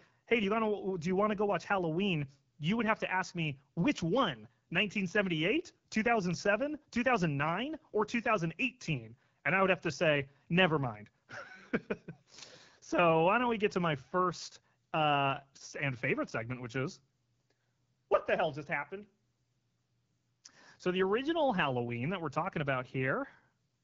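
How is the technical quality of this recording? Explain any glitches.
The recording is clearly degraded from start to finish, with the speech sounding rough, raspy and thin on top.

Throughout, the AMR wideband (HD Voice) codec is audible. The coarse, buzzy texture fits its low 8.85 kbit/s mode, where too few pulses drive the vocal tract model. The band from 6.4 to 7 kHz is filled with shaped noise rather than real detail.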